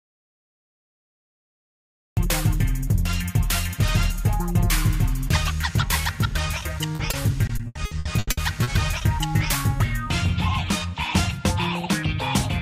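From the start until 2.17 s, an audio dropout to silence: the input feed was likely lost and the recorder kept writing pure silence. Nothing is heard, not even room tone, until the sound comes in abruptly at 2.17 s.

Between 6.95 and 8.69 s, repeated packet loss (robotic sound): audio kept going missing in quick succession, and each hole, the longest 80 ms, was patched by extending the preceding sound. About 28% of that stretch is filled-in sound, so it turns choppy, with pieces missing.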